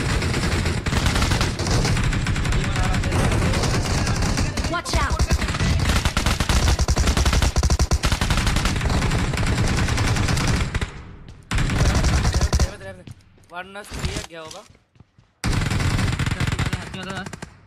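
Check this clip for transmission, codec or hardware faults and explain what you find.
Nothing in this clip sounds wrong from the transmission path or the equipment, so there's nothing here to flag.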